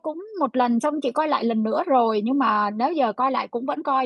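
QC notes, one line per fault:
Nothing to flag here; the speech comes across without any technical trouble worth noting.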